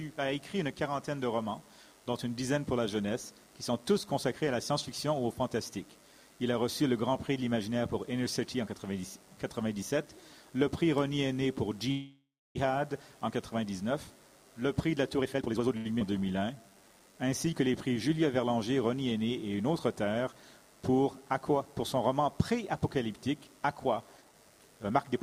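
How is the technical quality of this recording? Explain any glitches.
The recording has a run of network playback glitches, with one hold-up near 12 seconds and a dense cluster between 15 and 18 seconds, plus a final rush at the end.

From 11.91 to 12.57 s there is a call audio freeze. Packets were likely held back in transit, so the jitter buffer ran dry and the receiver had nothing new to play. It kept extending the last sound for about 0.64 s, fading it away, with roughly 0.32 s of that being silence. When delivery resumed, playback picked up exactly where it had stopped. Nothing is lost, but a gap is inserted and everything after it arrives later.

Jitter buffer speed-up occurs twice. From 15.18 to 15.76 s the buffer was holding more audio than its target, so the receiver repeatedly cut out tiny pitch-period slices, removing about 0.4 s and running at 168% speed. The pitch stays the same, but the passage sounds rushed and compressed. 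From 24.17 to 25.13 s the same trimming returns more gently at 126%, shaving off around 0.3 s.

A short stall from a late packet follows at 15.77 to 15.87 s. One packet failed to arrive on time, the buffer emptied, and the receiver stretched the previous sound for 81 ms until it showed up. Playback then continued from the same spot. Nothing goes missing, but one sound is held unnaturally long, with a faint buzzy or dipping quality.

At 15.99 to 16.03 s there is a skip ahead. About 0.2 s of audio was discarded while later material was already queued, so playback jumps forward. Only a 14 ms fill bridges the cut, which makes the join nearly seamless while still removing that short stretch of content.

From 16.39 to 18.15 s comes a jitter buffer slow-down. With its reserve running low, the receiver repeated single pitch periods and slivers of pauses, adding 195 ms and playing at 89% speed. The pitch is unchanged, but sounds are drawn out and sluggish, and there can be a slight warble.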